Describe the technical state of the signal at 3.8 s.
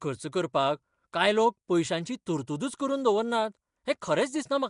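At 3.8 s, as across the whole clip, the speech carries a rough, hissy halo and a smeared, underwater blur, with nothing above 10.6 kHz. Nellymoser compression is the likely cause, at a rate that fits around 44 kbps. Starved bands are filled with noise rather than left swirling or metallic as in MP3.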